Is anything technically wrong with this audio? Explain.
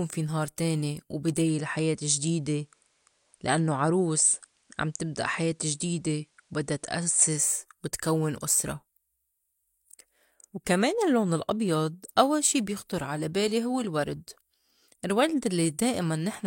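Yes. After "في نهار تاني", at 1.34 s, a digital radio blending to analogue occurs: the receiver loses the digital stream and cross-fades over 210 ms to the FM broadcast, returning to digital at 7.52 s before "وتكوّن أُسرة". Faint hiss appears, with no step in the waveform's level.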